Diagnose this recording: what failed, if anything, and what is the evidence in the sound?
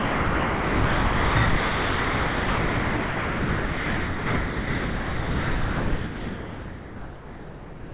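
Sound dropped by the voice detector, at the call-processing stage: steady comfort noise replaces the sound from 0 to 1.36 s, and again from 1.46 s onward. The sender's detector likely treated it as background and stopped transmitting, so the receiver filled the gaps.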